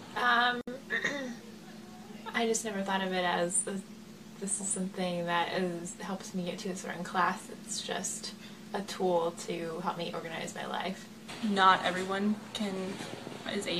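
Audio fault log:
0.61 to 0.68 s, gap at a join of encoded pieces: a 63 ms gap cuts into continuous sound, edges smeared, then the audio resumes where it stopped. Two separately encoded pieces were butted together untrimmed, leaving encoder start delay and last-frame padding in.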